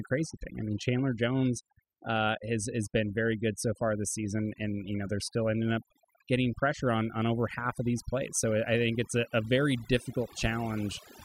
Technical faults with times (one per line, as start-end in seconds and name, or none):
0.00-11.24 overdone noise removal